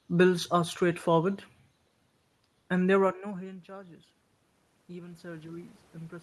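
From 4.87 s, automatic gain rising: the input fell about 21 dB, so the gain climbs and swells speech and noise alike. The waveform envelope and the spectrogram's noise floor rise together.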